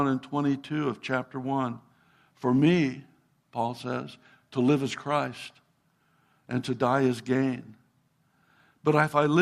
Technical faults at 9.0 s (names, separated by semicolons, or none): none